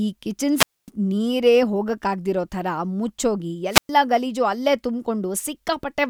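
Speech, with two wireless microphone squelch dropouts. The first runs from 0.55 to 0.90 s and the second from 3.70 to 3.90 s. Each starts with a brief surge of hiss as the analogue FM signal weakens. The receiver's squelch then shuts the output, leaving a hole of near silence. That mute lasts about 250 ms in the first dropout and about 110 ms in the second. The voice then returns.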